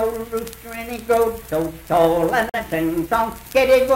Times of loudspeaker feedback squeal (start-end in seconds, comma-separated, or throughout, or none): none